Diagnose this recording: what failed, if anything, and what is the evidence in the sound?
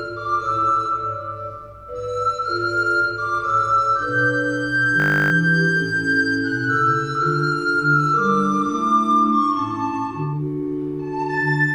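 A steady 50 Hz buzz replaces the sound from 5.0 to 5.32 s as one 20 ms fragment repeats exactly, about sixteen times. This is a system hang loop at the driver or buffer stage: the system stalled while the hardware kept replaying a ring buffer roughly 20 ms long.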